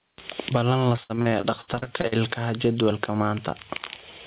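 Throughout the speech, gain pumping is audible, with a gain swing of roughly 20 dB. The likely cause is input gain set far too high, with a fast limiter repeatedly pulling it down, flattening loud and soft passages.

From 0.96 to 2.14 s, repeated packet loss produces a choppy, robotic texture. About a dozen holes, the longest 63 ms, are each patched by extending the previous sound, so roughly 30% of that stretch is concealed rather than real audio.

At 2.59 to 2.64 s, a wireless microphone noise hit appears as a brief swish of static. The FM radio link faded as reflections cancelled, letting receiver noise rise over the signal. The band limit at 4 kHz fits a G.711 call path.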